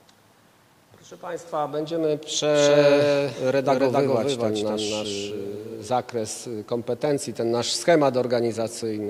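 From 2.54 s to 5.90 s a doubled audio track appears: a second full-band copy, roughly as loud as the first, trails by about 300 ms with no decay or room colour, then cuts off abruptly. Likely cause is the signal being captured twice through a slower path.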